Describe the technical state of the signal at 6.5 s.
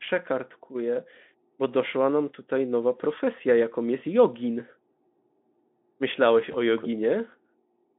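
At 6.51 to 6.55 s there is VoIP packet loss concealed by the speech codec: a single 20 ms frame went missing, and the decoder filled the gap by extending the last pitch and spectral shape at falling gain. It sounds like a brief stretched tone or coloured noise that fades. On a spectrogram, harmonics flatten into a fading, uniform band, and the waveform shows a short, repetitive, decaying stretch.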